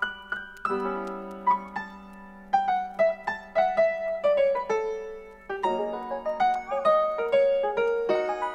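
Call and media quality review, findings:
Channel delay (comb filtering), whole clip. Hollow, phasey tone. Probable cause: one channel lagging the other by around 5 ms before mono summing, so shared content cancels. First notch near 100 Hz, then repeating roughly every 200 Hz. Spectrogram: evenly spaced dark horizontal bands, fixed for the whole clip. Waveform: little visible change.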